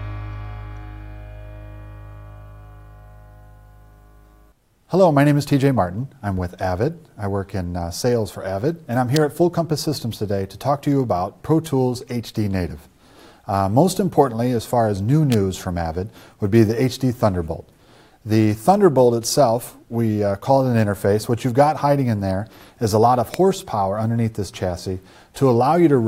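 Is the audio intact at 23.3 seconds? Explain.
No. At 23.34 s a sharp snap or tight cluster of clicks, an electrical switching spike, peaks around -5 dBFS on top of the sound, likely from a nearby switch or motor arcing into the audio line. Unlike a dropout or digital glitch, nothing underneath is lost or cut.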